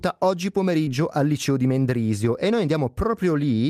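At 0.85 to 0.88 s the speech shows a short concealed packet loss: about 20 ms of audio arrived too late, and the receiver bridged the gap by extending the preceding sound for roughly 13 ms before blending back. Unlike a plain dropout, there is no silent gap, only a brief smear.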